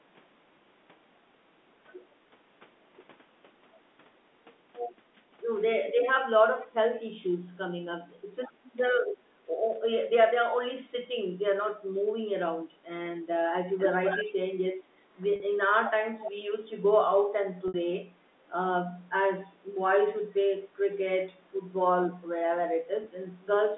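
At 8.64 to 8.72 s a faint delayed copy of the sound trails in, an echo leak, most likely from a far-end loudspeaker whose echo canceller let residue through, arriving 228 ms late. It returns much louder at 13.78 to 14.3 s, nearly as strong as the direct sound. On a spectrogram it shows as a smeared duplicate of the harmonic pattern, shifted 228 ms right.

At 15.36 to 15.40 s, a 40 ms gap is bridged by packet loss with pitch repetition: the last pitch cycle is looped, giving a brief buzzy hold. The waveform shows identical repeating periods, and the spectrogram shows frozen, flat harmonics.

A moderate echo recurs at 16.19 to 16.32 s, again 228 ms behind.

A 60 ms loss at 17.68 to 17.74 s produces a longer held buzz that fades before the sound resumes. The pattern fits 20 ms packets.

A single 20 ms repeat follows at 23.04 to 23.06 s.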